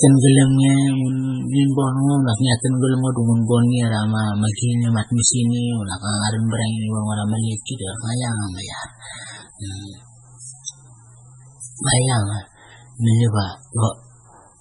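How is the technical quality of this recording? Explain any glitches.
Poor. Heavy MP3 compression damage runs through the whole speech recording. Nothing is heard above 10.4 kHz. The sound is watery and swirling, and s sounds turn metallic. The likely cause is an MP3 encode at a very low bitrate, which fits about 16 kbps. Short of bits, the encoder drops the treble and zeroes weak frequency lines. Those lines flicker on and off between frames.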